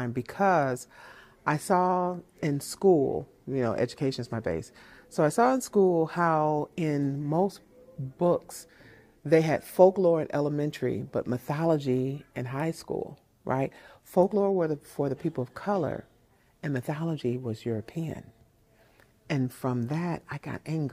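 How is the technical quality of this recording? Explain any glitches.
No glitches to explain: nothing here points to a technical fault at any point in the recording.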